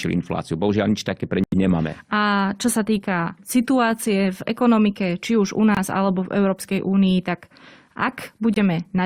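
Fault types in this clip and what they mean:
Corrupt frame muted: at 1.44 to 1.54 s, 5.75 to 5.79 s and 8.53 to 8.58 s the speech drops abruptly into silence, as damaged compressed frames were rejected by the decoder and replaced with nothing. The gaps span a few frames each, with timing kept intact.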